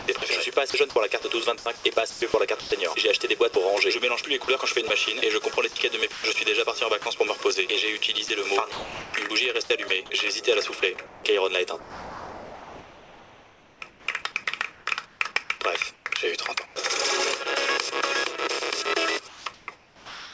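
The audio is a call recording, band-limited to nothing above 8 kHz, which fits a wideband call codec such as G.722. Across four stretches, 0 to 2.72 s, 4.44 to 7.06 s, 8.28 to 9.90 s and 10.80 to 16.76 s, the sound is chopped by the voice detector. Holes of synthetic noise replace about 0.6 s, 0.28 s, 0.46 s and 2.9 s of it respectively, likely because the sender's detector toggled transmission off and on. At 3.54 s the sound is dropped by the voice detector for a single 20 ms gap filled with steady noise, likely a brief misjudgement of the sound as background. From 19.28 s to the end, comfort noise takes the place of the background for about 0.9 s. The smoother, synthetic fill differs from the real ambience and likely comes from discontinuous transmission during a pause.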